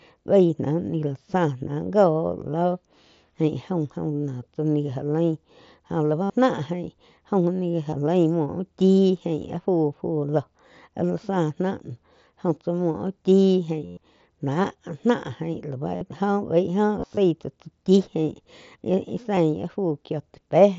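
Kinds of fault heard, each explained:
Concealed Bluetooth headset packet loss: packets from the headset dropped out, and the receiver patched each gap by repeating the best-matching recent stretch of waveform. The longest, 112 ms at 13.86 to 13.97 s, becomes a held buzzy tone. The 15 ms gap at 19.36 s is a short run of two lost packets.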